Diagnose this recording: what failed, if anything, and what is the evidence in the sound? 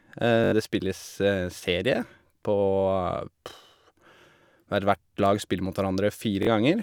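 Bluetooth stutter at 0.44 and 6.43 s on the wireless link: lost packets made the receiver loop its last slice into a buzz, skipping about 80 and 40 ms of speech.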